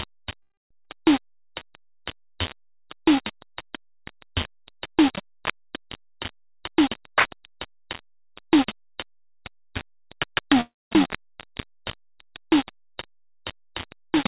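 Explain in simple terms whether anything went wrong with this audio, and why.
Low bit depth without dither runs through the whole piece of music: a coarse, gritty fizz that rises and falls with the sound, and quiet passages crackle and break up. The cause is likely the audio being stored with only about 4 bits and rounded off, so every sound is forced onto a few rough steps.

A call audio freeze occurs from 0.42 to 0.73 s and again from 10.61 to 10.93 s. Each time the music stalls, a brief leftover fades, then there is near-silence for about a quarter of a second. The likely cause is delayed network packets. When they arrived, the music resumed where it had stopped, so nothing is lost, only pushed later.

A skip ahead happens from 0.85 to 0.88 s. The music jumps forward, losing roughly 150 ms, and the two sides are stitched together almost directly. A stretch of audio was dropped while later audio was already waiting.

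A jitter buffer slow-down runs from 1.22 to 3.39 s. The music plays at 93% speed without changing pitch, stretched by repeating tiny slices. This adds 149 ms to rebuild a reserve of audio.

A jitter buffer speed-up runs from 6.47 to 10.56 s. The music plays at 107% speed at the same pitch, so the tempo feels rushed and uneven. Around 300 ms of tiny slices are cut out to reduce built-up delay.

Throughout, the phone-style call line leaves nothing above 4 kHz, giving the music a narrow, muffled top.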